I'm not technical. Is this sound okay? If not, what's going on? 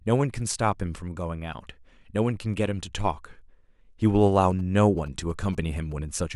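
No. From about 4.37 to 5.93 seconds there is a galloping dit-dit-dit of short buzzes under the speech. These are GSM signalling bursts. A nearby 2G phone was talking briefly to the network. Its radio pulses, repeating about 217 times a second, got picked up by the audio wiring and turned into sound. The buzz sits well below the speech. Keeping phones away from the recording gear prevents it.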